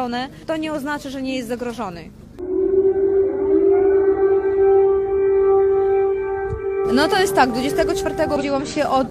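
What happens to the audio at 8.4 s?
Damaged data in a compressed stream, from 8.36 to 8.42 s: corrupted bytes make the decoder misread frames and lose sync, producing a brief chirp or blip.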